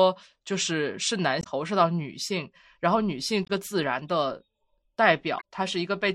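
Short chirps or squawks at 1.40–1.47 s, 3.44–3.50 s and 5.37–5.41 s come from damaged data in a compressed stream, which the decoder misreads while hunting for the next frame header.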